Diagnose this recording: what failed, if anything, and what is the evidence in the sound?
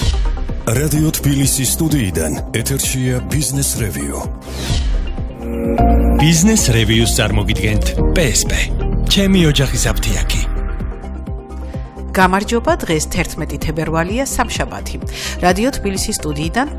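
Nothing in the sound points to a failure at any stage, so there's no diagnosis to make here.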